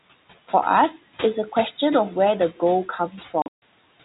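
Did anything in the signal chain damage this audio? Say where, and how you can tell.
Yes. The first problem sits in call processing: the noise suppressor is leaving artifacts across the whole clip. The room noise, about 18 dB below the speech, drops by about 17 dB in the gaps and swells back under the speech. Unlike a plain gate, which mutes everything, this reduction works band by band and frame by frame. That is why the noise rises and falls with the speech rather than simply switching off.

The second fault is packet loss filled with silence, a network problem. Between 3.42 and 3.62 s, about 180 ms of sound drops out across a 200 ms stretch, with the longest hole about 140 ms. The holes are silence with hard edges. Their sizes fit 20 ms packets. This sets it apart from a concealment fault, which would smear or repeat the audio, and from a suppressor dip, which would leave some noise behind.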